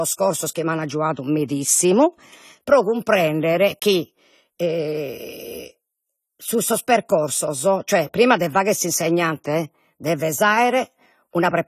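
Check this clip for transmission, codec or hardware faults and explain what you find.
The clip has one fault, present from start to finish.

AAC compression, throughout: the speech is clearly dulled and smeared, with nothing above 14 kHz, and a warbling, fizzy texture on sustained sounds and sibilants. The likely cause is AAC-LC coding at a low bitrate, consistent with about 32 kbps. That encoder quantises each frame's frequency lines against a hearing model, so at this rate it drops the top band and coarsely codes or fills what remains.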